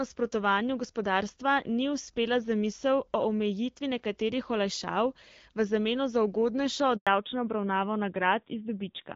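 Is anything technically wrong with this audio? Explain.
Yes, there are two linked problems near the end. First, a handover gap from about 6.97 to 7.07 s: the call switched networks and no speech frames got through during the move, so the audio drops out for a clean 100 ms of silence before the new link picks up.

Right after, at 7.07 s, there's a fallback to narrowband that lasts to the end. The HD Voice path, whose light coding sounds like AMR-WB at around 12.65 kbit/s, gives way to an older narrowband codec, probably AMR-NB near 7.4 kbit/s. Nothing above 4 kHz survives, so the speech turns duller and rougher.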